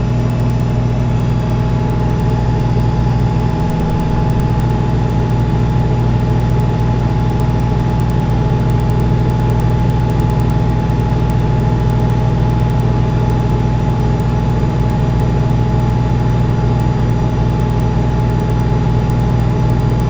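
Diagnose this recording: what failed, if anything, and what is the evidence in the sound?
The resampler restarted on every block during sample-rate conversion from 16 kHz to 48 kHz. It processed 100 ms blocks independently, leaving edge errors heard as ticks at 10 Hz throughout, only while sound plays. A spectrogram shows faint vertical broadband lines every 100 ms, and the waveform shows small steps at each block boundary.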